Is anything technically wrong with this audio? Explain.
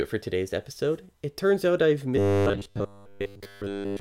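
Yes. From 2.17 to 4.00 s, just after "turns out I've", there is robotic sound from repeated short buffers, a rigid metallic buzz at 100 Hz. It is likely caused by audio arriving too seldom, so roughly 10 ms chunks are replayed for most of the stretch. The fixed pitch separates it from choppy dropouts.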